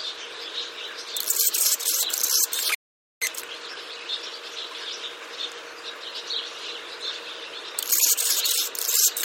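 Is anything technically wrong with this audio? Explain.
Yes, there are three faults.

Computer activity noise runs through the whole clip: a faint buzz pulsing around 200 times a second, roughly 45 dB below the sound. Shifting processor or peripheral load disturbs the audio circuit's shared ground. A spectrogram shows evenly spaced harmonic lines independent of the audio.

A playback stall cuts the audio from 2.75 to 3.22 s, a gap of about 0.47 s. The player likely ran short of data or had its thread blocked. The waveform drops to a flat line, and the spectrogram shows a blank vertical band.

Time-compressed catch-up follows from 3.22 to 6.22 s, running at 1.1 times normal speed. The player trims its backlog by splicing out short pieces and cross-fading, so pitch holds but the sound feels hurried. Spectrogram events appear horizontally squeezed.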